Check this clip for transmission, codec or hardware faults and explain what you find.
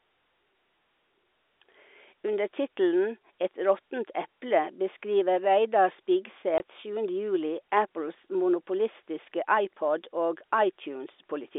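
One transmission fault is present in this speech clip: a single short dropout from packet loss filled with silence.

From 6.58 to 6.60 s the audio cuts to silence for 20 ms, which fits one lost 20 ms packet. The receiver had no data for that interval and inserted digital silence instead of concealing the gap, so the waveform drops to silence abruptly and then resumes. Those hard edges leave a momentary hole in the speech. The G.711 A-law telephone coding limits the sound to roughly 300 Hz to 3.6 kHz.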